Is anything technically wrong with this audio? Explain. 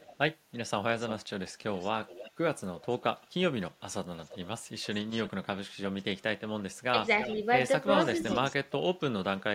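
Yes. A delayed copy of the speech trails the talker at 0.0–0.18, 0.98–3.28, 4.18–6.03, 7.15–7.36, 7.99–8.72 and 9.39–9.43 s. It lags by about a third of a second and sits about 10 to 30 dB below the speech. This is likely an echo leak: the far end's loudspeaker output reached its microphone and slipped past the echo canceller.

At 6.91–6.97 s the speech briefly dips by about 10 dB for roughly 70 ms. This is likely speech suppressed in double talk: with both sides sounding at once, the echo canceller mistook the talker for echo and pulled the level down.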